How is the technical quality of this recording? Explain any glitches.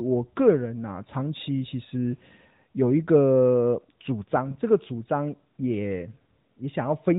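The speech carries one glitch, heard through the band-limited sound of the AMR narrowband mobile codec, which cuts everything above 4 kHz and points to its 12.2 kbps mode. From 4.47 to 4.57 s come AMR bit errors: a weak link flipped a few percent of the less protected bits across a span that fits about four 20 ms frames. Misplaced excitation pulses and skewed pitch and spectrum values make the speech briefly hoarse and gargly.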